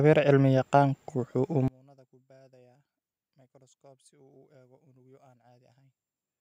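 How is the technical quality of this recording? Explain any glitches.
The recording has one clear fault. From 1.68 s to the end, the speech drops by about 33 dB to a faint residue, likely because one channel is inverted, so mono summing cancels the shared centre. Unlike a dropout, a faint ghost remains rather than silence.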